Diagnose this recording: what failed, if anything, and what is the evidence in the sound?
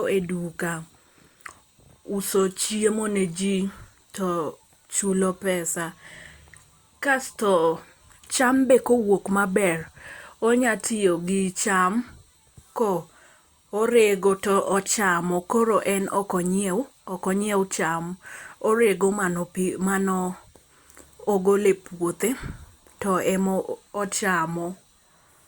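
Nothing failed: no stage in the chain, from wiring through playback, leaves any audible mark on this speech recording.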